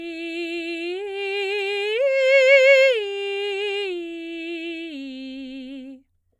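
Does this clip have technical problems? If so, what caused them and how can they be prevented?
No, this music clip has no technical problems to report. Nothing in it calls for a cause to trace or a fix to prevent.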